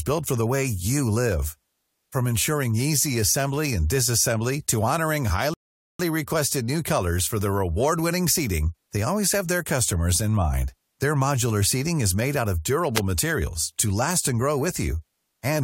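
The player's buffer ran dry at 5.54 s, a rebuffering stall: after "and disassembly to honoring" the speech halts in silence until 6.00 s, then resumes intact with "requested new colors for".

At 12.94 s the wireless microphone's FM signal faded and its squelch muted the receiver, a squelch dropout: after "made out of", a brief hole opens before "materials to last and" returns.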